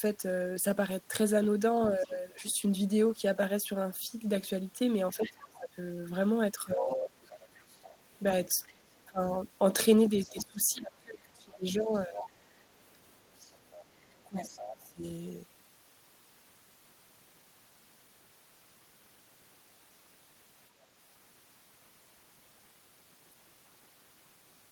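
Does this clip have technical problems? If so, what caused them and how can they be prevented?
Yes. Other side's voice leaking through: a faint second voice appears from 1.96 to 2.54 s, about 25 dB under the talker, then louder, about 15 dB under, from 5.13 to 14.88 s. The likely cause is loudspeaker playback reaching the microphone that the echo canceller didn't fully remove. On a spectrogram it shows as a weak, separate harmonic pattern beneath the main speech. Using a headset, or better acoustic echo cancellation, prevents it.

Speech suppressed in double talk: the talker's level dips sharply, by roughly 20 to 25 dB, at 2.06 to 2.11 s, 5.17 to 7.1 s, 8.72 to 12.23 s and 14.06 to 15.04 s. This likely happens because the canceller turns everything down when both sides talk at once. The waveform shows sudden envelope notches, and the spectrogram thins in the same spans. A canceller with proper double-talk detection avoids this.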